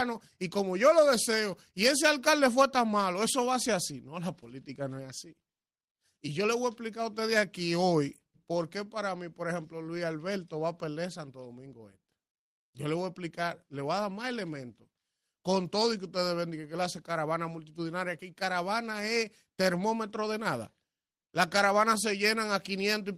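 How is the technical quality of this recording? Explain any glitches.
The technical quality is sound throughout, and there are no glitches in the speech to explain.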